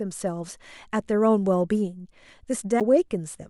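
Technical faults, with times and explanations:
2.80 s, CD skip: the speech drops out in a tick-like mute of roughly 10 ms, then resumes from a different point, because a shock or disc flaw knocked the laser onto another turn of the spiral track, so playback carries on from the wrong place.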